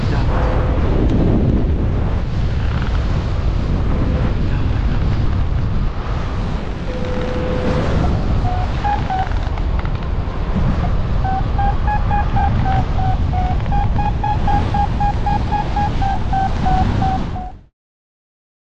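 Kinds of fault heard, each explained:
No faults are heard, and the fade-out is smooth.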